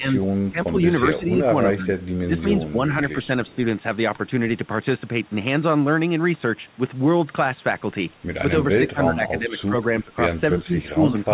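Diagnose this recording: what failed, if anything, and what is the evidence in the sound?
Speech suppressed in double talk, in call processing, at 0.0–0.77, 1.18–1.89, 2.27–2.77, 8.78–10.17 and 10.54–11.33 s. The speech drops by up to about 15 dB, likely from the echo canceller ducking while both sides talk.

Echo leak, in call processing, at 3.25–3.55 s. A faint copy about 30 dB down trails the speech by 308 ms, likely loudspeaker echo that the canceller missed.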